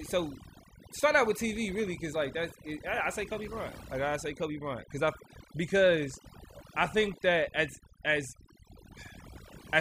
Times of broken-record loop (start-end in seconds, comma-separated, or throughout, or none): none